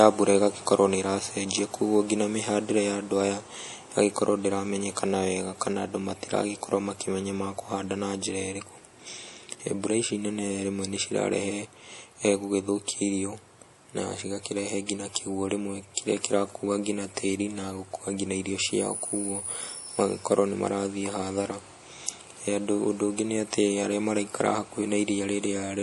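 Likely low-bitrate MP3 compression, around 48 kbps, runs throughout, cutting everything above 11.5 kHz and leaving plainly audible watery, swirly smearing on the speech.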